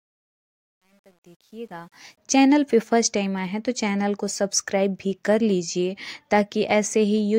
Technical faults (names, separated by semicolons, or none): truncation distortion on a fade